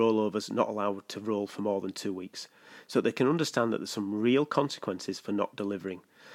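No technical faults can be heard anywhere in the speech recording. There is nothing in it to place on a timeline.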